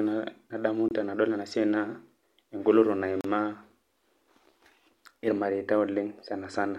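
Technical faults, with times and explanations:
0.88–0.91 s and 3.21–3.24 s, Bluetooth stall: the speech drops to silence for about 25 ms, resuming on "tenadol ena", then for about 35 ms, each time picking up where it stopped or slightly later. This is likely a wireless link whose packets were held up by interference, draining the headphone buffer until retransmissions arrived.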